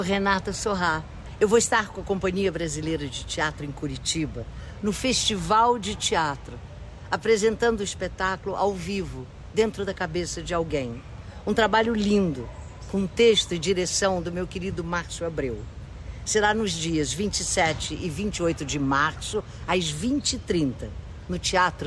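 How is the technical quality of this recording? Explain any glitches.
No glitches can be heard anywhere in this recording. There is nothing in it that calls for a technical explanation.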